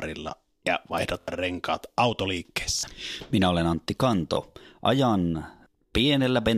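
Short stutters at 1.21–1.28 s, 2.79–2.83 s and 4.34–4.37 s, where a 23 ms slice of speech repeats with hard joins, are repeated buffers. Late audio made the device replay its last buffer, which fits a 1024-sample size.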